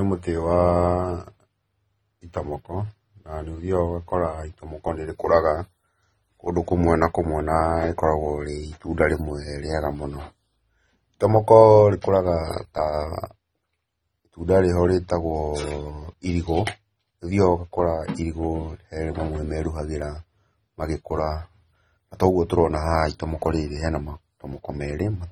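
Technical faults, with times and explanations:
Throughout, AAC compression: the speech sounds dull and smeared, with its top end cut away early and a warbling, fizzy texture on sibilants and held sounds. The likely cause is lossy AAC-LC coding at a low rate, and the damage fits about 24 kbps. With so few bits per frame, the encoder drops the high frequencies and quantises the remaining bands coarsely. It also leaves gaps that shift from frame to frame, which produces the swirling artefacts.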